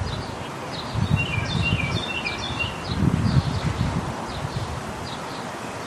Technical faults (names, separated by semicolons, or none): none